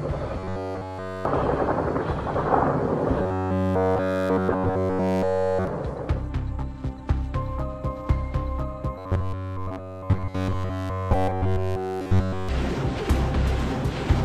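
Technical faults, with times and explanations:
0.39–1.25 s, 3.22–5.67 s, 8.98–12.49 s: robotic sound from repeated short buffers. Essentially all of the audio becomes a rigid metallic buzz at 93.8 Hz, likely from one 10.7 ms block looping while fresh audio is missing.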